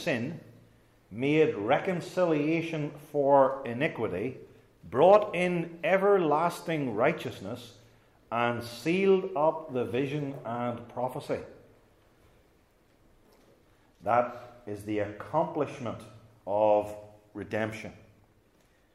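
Nothing goes wrong anywhere in the audio, so there's no fault to point to here.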